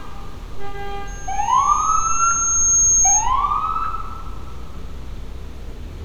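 At 1.07 s a loudspeaker feedback squeal starts, a single tone at 6.5 kHz that climbs steadily for around one and a half seconds before settling at roughly 10 dB above the surrounding sound. A microphone was picking up the loudspeaker it fed, and at that frequency the loop gain passed unity, so the tone kept reinforcing itself. It stays a thin, piercing whistle until it stops at 3.32 s.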